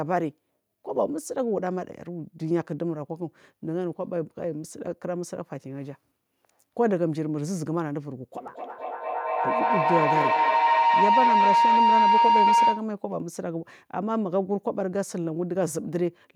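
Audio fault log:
8.35–12.94 s, feedback howl: a loop gaining level each pass builds a tone near 1 kHz, repeating roughly every 200 ms, peaking about 7 dB above speech.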